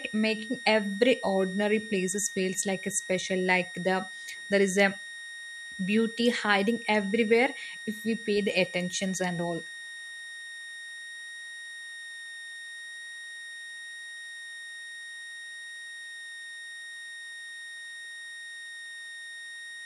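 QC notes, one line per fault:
Throughout: switching supply whistle, a steady high tone between 1.85 and 1.87 kHz, roughly 15 dB below the speech. It likely comes from a power supply cycling in audible burst mode.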